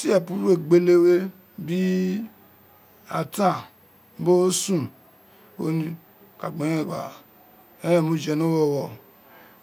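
Throughout the speech, a switching supply whistle sits between 14.0 and 14.5 kHz, roughly 35 dB below the speech: a faint high tone from a power supply running in an audible burst mode or beating with another supply.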